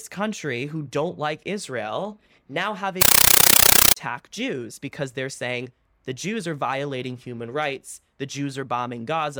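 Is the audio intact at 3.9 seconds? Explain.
No. From 3.02 to 3.96 s, after "now have", a compressed stream is played as audio. Undecoded AC-3 data gives loud chattering static, 9.33 ms noise bursts repeating 31.25 times a second.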